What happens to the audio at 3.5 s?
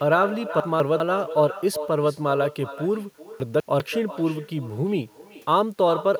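Chunks out of order, from 3.4 to 3.8 s: two 200 ms pieces of the speech play swapped, with the later one first and the earlier one second. Nothing is missing, but the three hard joins give a jumbled, garbled moment.

Echo with no canceller runs through this moment too. The far end's loudspeaker feeds its microphone, and nothing removes that pickup. The speech returns roughly 0.4 s later as a thinner copy, about 12 dB quieter.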